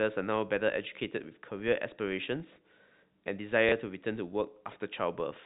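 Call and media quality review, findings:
Small blip at 3.69–3.72 s. Packet loss with last packet repeated: receiver replayed about 30 ms of old audio, fitting one lost packet. Audio band-limited below 4 kHz, consistent with G.711 telephone coding.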